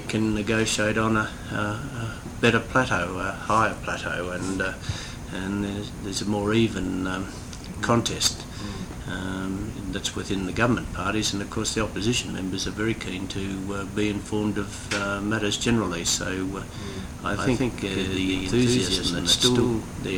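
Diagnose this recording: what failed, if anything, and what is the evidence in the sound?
Doubled audio track from 17.30 s to the end. At that point a second, full-band copy of the sound appears abruptly, trailing the original by around 150 ms at about the same level. It has no decay tail or room colouring. Most likely the signal is being picked up a second time through a slower capture path at the driver or routing stage, so two identical streams sum out of step until the clip ends.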